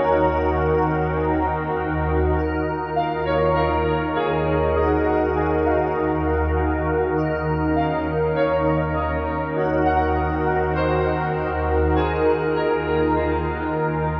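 No technical faults are audible.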